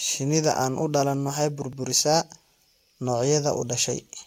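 At 1.73 s, right after "aan u dhalan waxay", the speech jumps forward by a few milliseconds. This is likely a dropped buffer (overrun): the samples were overwritten before they were read, so that stretch is lost and the audio on either side is spliced directly together. Unlike a dropout, there is no gap of silence. The sound simply skips.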